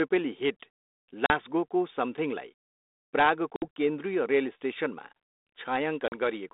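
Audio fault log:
1.26–1.31 s, 3.56–3.66 s, 6.08–6.19 s: packet loss on an ADPCM call. The speech drops into hard-edged silence for about 40, 60 and 40 ms, roughly two or three packets each. When sound resumes, the decoder's adaptive predictor and step size no longer match the sender's, so the speech returns with brief distortion before settling. That recovery artefact separates it from a plain dropout or mute. The line's light 32 kbit/s G.726 grain and 250 Hz–3.7 kHz band stay constant throughout.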